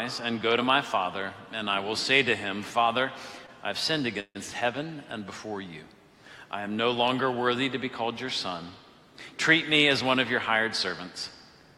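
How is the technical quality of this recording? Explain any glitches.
The recording has three timing glitches, all from delivery problems.

From 3.46 to 3.50 s there is a short stall from a late packet. A packet arrived late. The receiver held the last sound about 18 ms, so it lingers briefly. Nothing is lost.

From 4.20 to 4.37 s there is a call audio freeze. The sound stretches into a fading buzz, then about 60 ms of silence. This adds about 149 ms. Packets were likely held up in transit.

From 9.62 to 11.32 s there is a jitter buffer speed-up. The receiver trimmed tiny pieces to cut delay, removing about 150 ms. Playback runs at 107% speed, at the same pitch, and sounds hurried.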